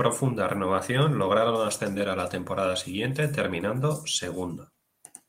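A short bit of recorded speech, and nothing in it sounds technically wrong at any point.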